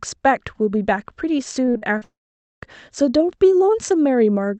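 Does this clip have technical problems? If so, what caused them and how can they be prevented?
Yes. From 1.65 to 2.03 s, repeated packet loss makes the sound choppy and robotic. Four short holes, the longest 42 ms, are patched by repeating the last sound. On a spectrogram these show as smeared, stuttering blocks. A more stable connection with forward error correction and a deeper jitter buffer would prevent this.

From 2.03 to 2.63 s, a brief fading buzz gives way to about half a second of near silence, which appears as a flat stretch in the waveform. The likely cause is a long network dropout. A wired or less congested network link would prevent it.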